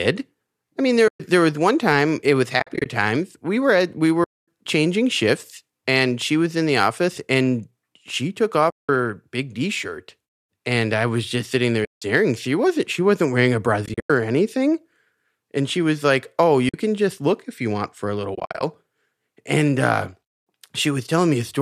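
AAC frame loss with muting recurs eight times in this speech: at 1.08 to 1.20 s (after "I mean", before "was one time it"), 2.60 to 2.86 s, 4.24 to 4.46 s, 8.70 to 8.89 s (after "office and she took"), 11.85 to 12.02 s (after "was just sitting there"), 13.86 to 14.10 s, 16.69 to 16.74 s, and 18.35 to 18.63 s. The decoder zeroed the spectrum of each missing frame, and the overlapping windows fade the sound out and back in over about one frame. Each loss becomes a soft-edged silent hole. The losses range from 50 to 240 ms each. Those at 2.60, 13.86 and 18.35 s are broken into several short gaps, the longest from roughly 50 to 100 ms. The frame spacing fits 10 ms frames, likely from low-delay AAC-ELD running at 64 kbps with light coding damage.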